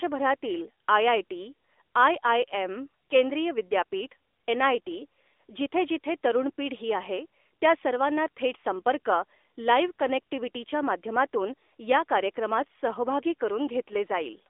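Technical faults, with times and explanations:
Throughout: AMR narrowband mobile codec. The speech passes through a band of roughly 300 Hz to 3.6 kHz, so it sounds thin and boxed-in, with no air or sibilant brightness. On a spectrogram, energy stops flat below 300 Hz and above 3.6 kHz. The codec rebuilds the voice from a vocal-tract model driven by sparse pulses, which gives a plainly audible buzzy, synthetic edge. That degree of damage points to a mid-rate mode of around 10 kbps.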